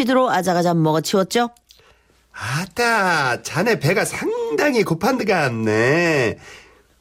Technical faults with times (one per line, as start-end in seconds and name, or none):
none